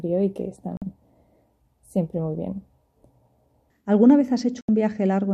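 The audio has two digital broadcast dropouts, from 0.77 to 0.82 s and from 4.62 to 4.69 s. Each time the receiver stopped getting usable frames and muted until valid ones returned. The gaps last about 48 ms and 72 ms, which fits two and three lost frames of 24 ms. The sound drops to silence and resumes further on, and whatever was broadcast during each gap is simply gone. A tape dropout differs because it only dips the level and dulls the top end, leaving the material muffled but still present.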